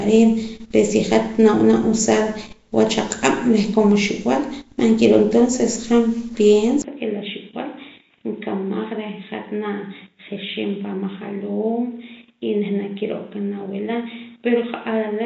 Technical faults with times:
0.00-15.26 Nellymoser compression
6.82-15.26 input switched to a poorer device

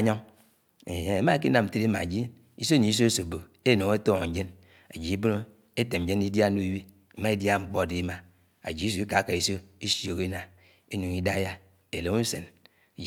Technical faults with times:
none

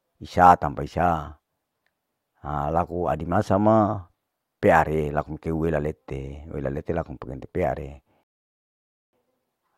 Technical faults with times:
8.23-9.13 rebuffering stall

